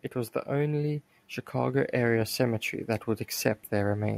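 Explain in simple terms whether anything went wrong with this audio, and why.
From 0.45 to 2.69 s the speech and the background swell together, getting louder. That's automatic gain rising: the recorder judged the input too quiet and turned itself up.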